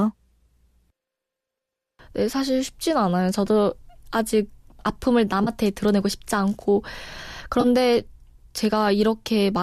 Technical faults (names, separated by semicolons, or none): AAC frame loss with concealment